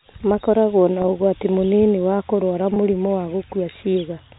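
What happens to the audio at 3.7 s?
Nothing goes wrong at 3.7 s; the speech carries on intact through the narrowband telephone-style coding heard across the clip.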